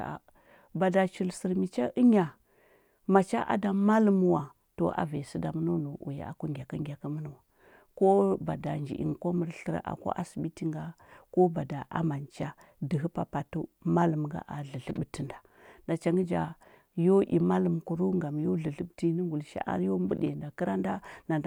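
No technical faults are audible anywhere in the speech recording.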